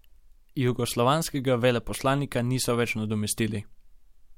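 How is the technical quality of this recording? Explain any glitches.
No glitches or faults detected.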